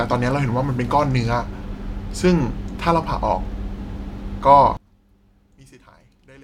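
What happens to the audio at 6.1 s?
At 6.1 s the speech has dropped by about 26 dB to a faint remnant, from 4.77 s through the end, most likely one channel inverted, cancelling the shared centre on mono summing.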